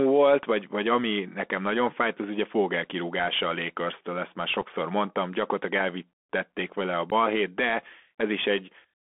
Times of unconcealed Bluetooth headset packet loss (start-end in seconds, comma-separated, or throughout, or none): 4.61, 7.10-7.13